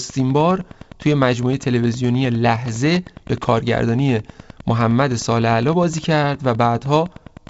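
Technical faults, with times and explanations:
Throughout, Wi-Fi interference: a nearby radio's beacon, every 102.4 ms, is rectified into steady ticking about ten times a second, roughly 25 dB below the speech.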